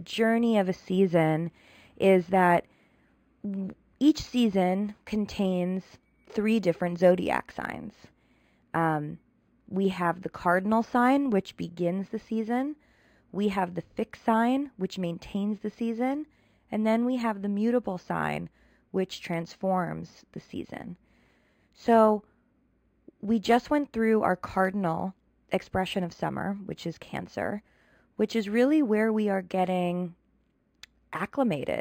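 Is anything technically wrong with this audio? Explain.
Yes. The speech runs throughout with imaging from linear upsampling. The band stops near 5.5 kHz, which points to material originally at about 11 kHz brought up to 44.1 kHz by straight-line interpolation between samples. That interpolation filters poorly, so the top of the real band is dulled and a mirrored copy of the spectrum sits from 5.5 kHz to 11 kHz, roughly 35 dB below the signal. It is heard as a faint metallic shimmer on sibilants.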